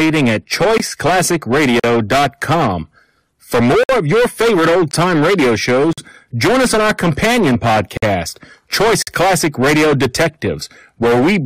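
Hard clipping runs throughout: the speech was driven about 17 dB past what a stage could pass, flattening roughly a third of the waveform and adding a fuzzy, crackling edge to loud sounds.

Gaps between stream segments occur at 0.78 s, 1.80–1.84 s, 3.83–3.89 s before "of your favorite old", 4.91 s between "of your favorite old" and "time radio", 5.93–5.98 s, 7.97–8.03 s after "us on our companion", and 9.02–9.07 s. They fall on one-second segment boundaries, where time stamps left holes of 17 to 58 ms that play as hard-edged silence without losing audio.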